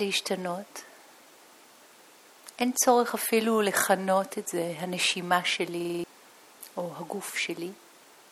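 At 5.81 s a system hang loop kicks in, lasting until 6.04 s. Things froze while the hardware kept replaying its ring buffer, so a 46 ms slice repeats five times at 21.5 Hz, a quick stutter that fits a 2048-sample buffer.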